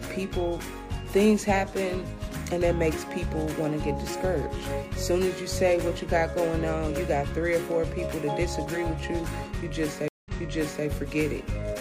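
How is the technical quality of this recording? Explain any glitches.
One glitch stands out: a stream reconnect between 10.08 and 10.86 s. The connection dropped, leaving a 175 ms gap, and a fresh decoder resumed 0.6 s earlier. The waveform and spectrogram show a flat blank, then repeated material.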